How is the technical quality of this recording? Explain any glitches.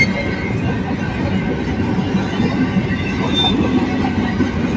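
The technical quality holds up, with no glitches to explain.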